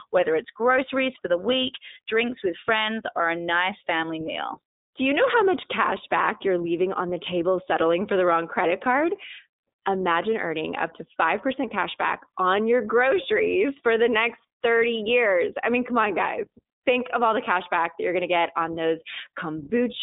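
It's a speech clip, and the whole thing has been through the iLBC codec, so it sounds like a narrowband VoIP call. The band sits between roughly 250 Hz and 3.7 kHz, with nothing up top. Each short frame's excitation is coded on its own, and the damage is plainly audible: a rough, slightly synthetic edge on the voice throughout. The grain fits 20 ms frames at around 15.2 kbps.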